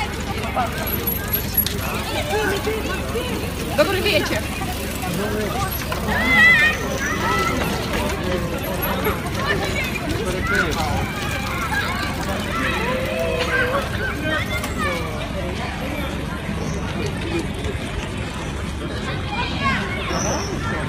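At 15.15 s the audio switches abruptly to an adaptive stream at a lower bitrate, and stays there to the end. There is no gap. The player dropped to a cheaper version of the stream, likely because the connection slowed. The sound points to a change from 96 kbit/s AAC to 16 kbit/s HE-AAC. Nothing remains above 12.3 kHz, so the treble is cut. Codec artefacts rise.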